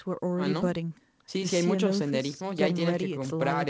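No technical faults can be heard in the speech, which carries the band limit of a call path with nothing above 8 kHz, as fits a wideband codec such as G.722.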